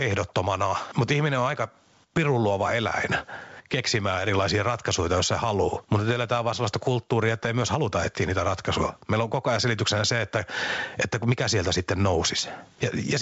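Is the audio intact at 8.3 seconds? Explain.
No, gain pumping runs through the whole clip, 8.3 s included. The gain swings by about 10 dB, likely from gain set too high with a fast limiter clamping down on each loud sound, so everything sounds squashed.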